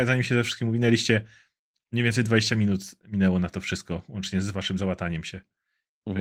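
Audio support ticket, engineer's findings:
No faults found on listening; no dropouts, clipping, glitches or timing problems heard anywhere in the speech.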